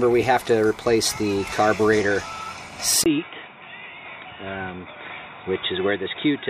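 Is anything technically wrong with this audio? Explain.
Yes. At 3.04 s the sound breaks for about 20 ms, then continues to the end dull, boxy, somewhat quieter, with nothing above 3.8 kHz and a new noise floor. This is most likely an input switched to a poorer device. The new level and noise distinguish it from a plain bandwidth drop.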